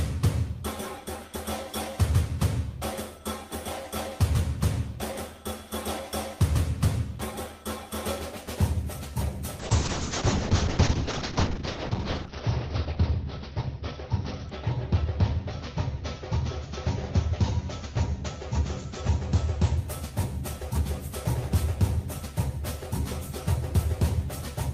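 From 9.6 to 19.83 s there's a call bitrate drop: highs vanish above 6 kHz and the sound goes rough and muffled, which fits Opus squeezed to about 6 kbps.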